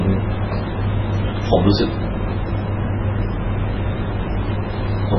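From start to finish the speech has nothing above about 5.9 kHz, and it carries the smeared, watery artefacts of a heavily squeezed encode. This is likely low-bitrate audio saved at a high bitrate. An early MP3 pass at a very low rate, around 16 kbit/s, discarded the upper band and fine detail, and a later high-rate MP3 encode, on the order of 320 kbit/s, preserved that damage without restoring anything.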